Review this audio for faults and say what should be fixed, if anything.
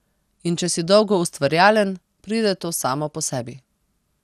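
Throughout the speech the sound is swirly and hollow, with smeared attacks and nothing above 15.3 kHz. This is likely generation loss: about five rounds of MP2 encoding at what fits 96 kbit/s, each requantising on a shifted frame grid so the damage accumulates. To prevent it, keep a lossless master and encode to a lossy format only once, as the final step.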